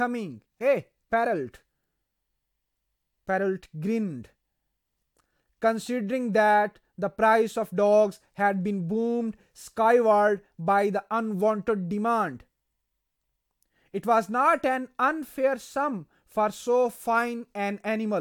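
Nothing in the recording stood out as a technical fault on listening.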